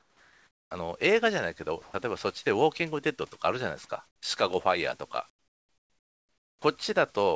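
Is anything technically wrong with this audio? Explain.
Yes. Comfort noise replaces the background at 0.00–0.71 s, 1.82–1.94 s, 4.07–4.22 s and 5.30–6.62 s. The likely cause is discontinuous transmission: the receiver synthesizes steady, featureless noise instead of the real room sound. Its level jumps by about −6, +4, −14 and −17 dB. On a spectrogram these gaps show as smooth, uniform bands with abrupt level steps at their edges.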